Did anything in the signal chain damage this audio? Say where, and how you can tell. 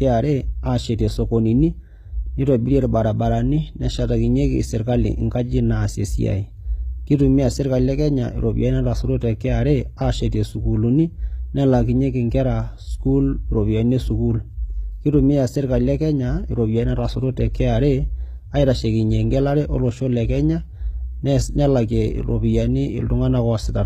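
Yes, at the codec stage, throughout: s sounds turn gritty and lispy because the treble is rebuilt from copied lower bands that misalign with the harmonics below. Nothing exists above 14.9 kHz. A spectrogram shows smeared, repeated upper bands under a hard ceiling, likely HE-AAC compression near 20 kbps.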